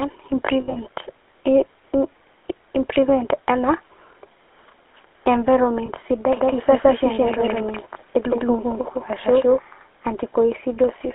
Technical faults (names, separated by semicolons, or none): GSM full-rate codec; lost GSM frames; doubled audio track